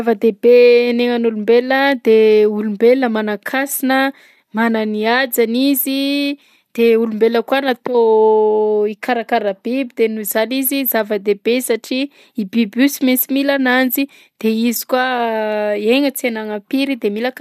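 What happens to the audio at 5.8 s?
Word clock ticks run through this point, part of a series from 0.41 to 17.04 s. The receiving clock drifts by roughly 15 ppm against the sender, so about every 1.5 s a sample slips, giving a sharp tick. Each shows as a one-sample waveform step and a thin broadband vertical line on a spectrogram.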